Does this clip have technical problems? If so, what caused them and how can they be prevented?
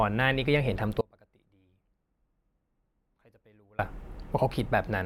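Yes. There is an audio dropout to a faint residue from 1.01 s to 3.79 s, nearly 2.8 s of lost speech. The speech cuts off abruptly, not as a pause or fade. The gap is not silent. A faint residue remains, roughly 30 dB below the normal signal level. The speech then returns just as suddenly. The likely cause is a break in the signal feed while the downstream path stayed live. Securing connections and monitoring the input feed would prevent it.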